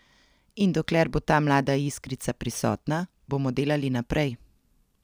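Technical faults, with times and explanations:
0.0 to 3.53 s, crude rate conversion: the audio was resampled upward by straight-line interpolation between neighbouring samples, with no anti-imaging filter. The ratio fits a conversion from 32 kHz to 44.1 kHz. The interpolation error repeats in a fixed cycle set by that ratio, leaving mirror-image tones with no harmonic tie to the speech, roughly 30 dB below it. They come through as a faint gritty fizz riding on the louder and brighter parts of the speech.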